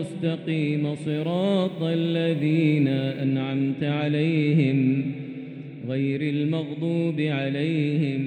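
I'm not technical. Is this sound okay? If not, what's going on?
No. From about 1.09 to 3.24 seconds the sound turns grainy and rough, especially in its quieter moments. This is most likely low bit depth without dither: the audio is stored with too few steps, which fits about 10 bits, and each value was simply rounded to the nearest step. Ordinary background hiss stays steady, but this grit rises and falls with the sound itself and disappears when the sound stops.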